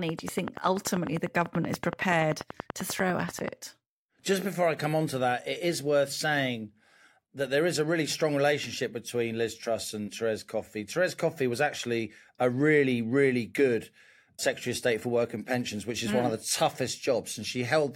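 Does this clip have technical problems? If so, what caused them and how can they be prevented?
Yes. A train of clicks runs from 0.09 s to 3.49 s: about forty near-identical ticks at a steady 10.3 per second, peaking roughly 15 dB above the speech and audible in the gaps too. The likely cause is interference from nearby equipment or a faulty connection or power supply injecting periodic pulses. On a waveform they show as evenly spaced spikes, and on a spectrogram as thin vertical lines. Keeping cables and interfaces away from noisy devices prevents this.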